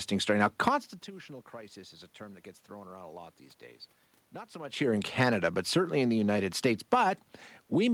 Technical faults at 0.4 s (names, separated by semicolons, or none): none